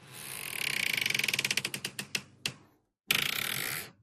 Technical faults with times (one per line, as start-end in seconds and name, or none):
0.00-4.02 MP2 compression
1.41 bit error spike
3.14-3.55 DAB burbling